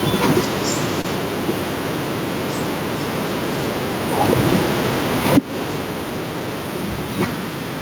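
Speech with two audible faults. Throughout, the level breathes. The swing is a few decibels, around 5 dB. Loud and quiet passages sit close together, and the sound feels squashed. This is gain pumping, likely from input gain set too high and a fast limiter or compressor clamping down on every loud sound. At about 1.01 to 1.06 s there is a short stall from a late packet. One sound is held too long, for about 31 ms. Nothing is lost. The audio resumes exactly where it stopped. The jitter buffer ran dry, so the receiver stretched the last sound until the packet arrived. From then on, everything plays about 31 ms later than before.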